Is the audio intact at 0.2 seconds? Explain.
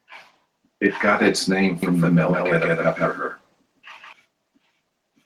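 Yes, at 0.2 seconds the audio is intact, with no dropout, click, distortion or other fault at that moment.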